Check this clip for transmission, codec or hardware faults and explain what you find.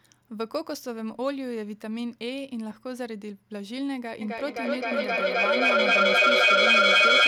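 One fault is present. Feedback echo between two devices runs from 4.21 s to the end at 7.27 s. A second device in the room replays the call and its microphone sends it back. Each word returns roughly every third of a second, thinner and ringing, and the repeats build to about 12 dB above the speech.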